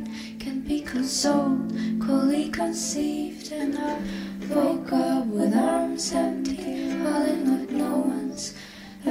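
Nothing in this one jumps out as a technical fault; it just runs along without any glitches catching the ear.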